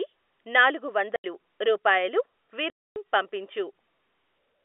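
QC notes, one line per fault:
1.16–1.24 s and 2.70–2.96 s, packet loss filled with silence: the audio drops to dead silence for 80 ms, then for 260 ms, because the receiver had nothing to play. Both gaps are multiples of 20 ms, which fits 20 ms packets. The cut in and out has hard edges against the narrowband telephone sound.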